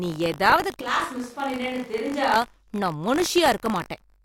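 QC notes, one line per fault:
Throughout, buffer tearing: a steady robotic buzz at 50 Hz rides on the speech whenever it sounds. The writer and hardware pointers cross each 20 ms period, splicing in a tiny sliver of audio about 40 ms old.
0.81–2.36 s, switch to a distant microphone: just after "நீ ஏதாவது" the voice abruptly turns roomy and thin, about 5 dB quieter, with room noise roughly 30 dB below it. The close microphone likely dropped out, leaving a farther pickup.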